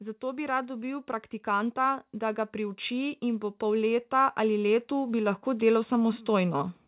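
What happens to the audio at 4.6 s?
At 4.6 s the speech sits partway through a case of automatic gain rising that runs from 0.19 to 6.73 s. The gain control, judging the input too quiet, keeps lifting its gain, about 14 dB in total, so voice and background noise swell together steadily.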